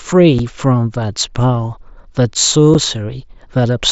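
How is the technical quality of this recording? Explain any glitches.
The speech has two brief dropouts, heard over the light grainy texture of an mSBC Bluetooth headset link. The faults are unconcealed Bluetooth headset packet loss at 0.39 s and 2.74 s. Each hole lasts 7.5 ms, which fits a single lost packet replaced by silence. Each hole has abrupt edges.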